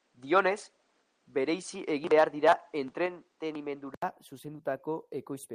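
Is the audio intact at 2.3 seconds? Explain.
No. At 2.3 s the sound carries two faults at once.

The first is an input switched to a poorer device, running from 0.0 s to 4.02 s. The capture has likely been on a lesser microphone or a headset call profile until the system returns to the better input at 4.02 s, with a gap of about 80 ms at the switch. Throughout this span the band is narrower, so the sound is dull and lacks air. The device also adds its own background noise, faint and well below the signal, and its own tone, though the level stays about the same across the switch.

The second is microphone overload, from 2.18 s to 2.53 s. The input gain is likely set too high, so the loudest peaks drive about 5 dB past the converter's ceiling and their tops are sheared flat. Only a small fraction of samples is clipped, but that is enough to add a harsh, crackling edge to the strongest syllables in this stretch.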